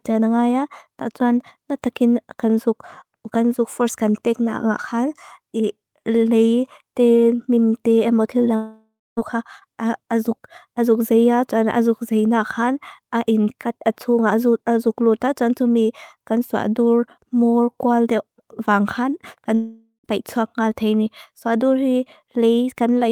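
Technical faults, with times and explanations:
8.55–9.19 s and 19.55–20.06 s, long network dropout: the incoming stream likely stalled, so the receiver lost about 620 ms and then 500 ms of speech. It covered each gap by carrying the last sound forward as a buzzy hiss that fades out, leaving about 240 ms and 100 ms of silence at the tail. Speech then resumes mid-flow, with the missing stretch simply gone rather than delayed.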